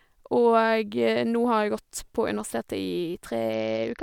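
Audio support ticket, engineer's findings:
Bluetooth SBC bit pool drop, 3.53 s to end of clip (4.02 s). Link congestion forced the encoder down from a bit pool near 28 to about 8, roughly 72 kbps. Upper sub-bands starved and the rest coarsely quantised, so the speech turns dull and gritty.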